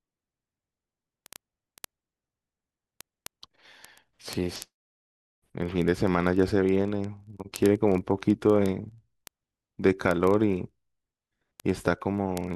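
From 0.13 s to 12.54 s the speech carries word clock ticks: the receiving device runs on its own clock, unlocked from the sender's, so the two drift past each other by several hundred parts per million. At every slip a single sample is dropped or repeated, producing hundreds of sharp ticks roughly every 30 ms, uneven in strength. Unlike random crackle or buffer dropouts, these clicks keep a steady rhythm and never leave gaps in the sound.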